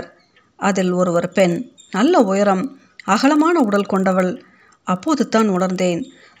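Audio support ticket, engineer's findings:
Resampler restarted on every block: 25 Hz tick-buzz under the speech throughout, fits 40 ms blocks. Each 16 kHz to 48 kHz conversion starts cold, so every block edge gets a small glitch.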